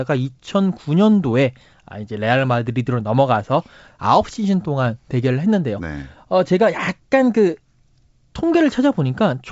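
No faults are audible in this speech recording.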